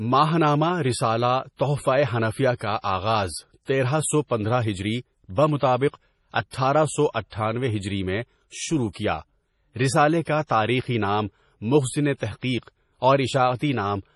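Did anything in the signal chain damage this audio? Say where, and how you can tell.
Yes. The damage sits at the codec stage and runs through the whole speech clip. There is nothing above 11.4 kHz, a hard treble ceiling, and the remaining sibilants sound watery and swirly, with metallic chirps on s sounds and smeared consonant attacks. This is likely heavy MP3 compression, consistent with a low bitrate around 32 kbps: the encoder dropped the top band and zeroed weak frequency lines that flicker from frame to frame.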